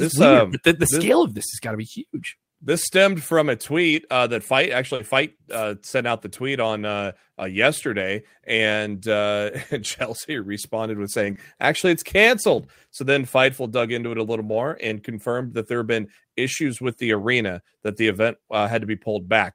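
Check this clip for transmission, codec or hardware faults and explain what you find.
Two transmission faults recur in this speech clip, both from packets that failed to arrive.

Lost packets rebuilt from error correction occur at 1.67–1.73 s, 3.91–3.97 s, 4.99–5.01 s, 8.01–8.03 s, 11.25–11.31 s, 14.49–14.55 s and 18.11–18.13 s. Each packet that went missing had a low-bitrate duplicate carried inside the packet behind it, and the decoder played that duplicate instead. There is no gap, but stretches of 20 or 40 ms, consistent with one or two lost packets each time, come out coarser and noisier than the surrounding speech.

Short concealed packet loss appears at 4.95–5.01 s, where 40 ms was missing, and at 11.33–11.37 s, where 20 ms was missing. No backup copy was available for these, so the receiver extrapolated from the last sound it had, extending the pitch of voiced sound or generating shaped noise for unvoiced sound, then crossfaded back into the real signal. 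The result is a brief smeared or wavering patch. The first overlaps one of the error-corrected rebuilds, and the second follows one closely.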